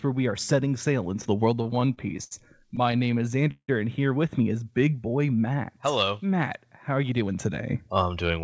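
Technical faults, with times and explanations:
1.56 to 2.33 s and 2.69 to 3.70 s, repeated stalls (stutter): packets arrived late or too slowly, so the jitter buffer emptied again and again and the receiver stretched the last sound to fill each wait. The first run has nine stalls totalling 172 ms, the longest 72 ms. The second has thirteen totalling 279 ms, about 28% of that span, with one 172 ms hold that fades. Nothing is lost, but the speech halts and drags.
4.53 to 4.97 s, jitter buffer slow-down: with its reserve running low or its target delay just raised, the buffer built up a reserve by repeating single pitch periods and bits of pause, adding 64 ms. Playback drops to about 87% speed at unchanged pitch, so sounds in this stretch are drawn out.
6.90 to 8.39 s, jitter buffer speed-up: the buffer held more audio than its target, so it trimmed short pieces of one or a few pitch periods, removing roughly 150 ms in total. 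Playback runs at about 108% speed while the pitch stays the same, so this closing stretch sounds slightly hurried, all of it coded with the call path's G.722 codec, which leaves nothing above 8 kHz.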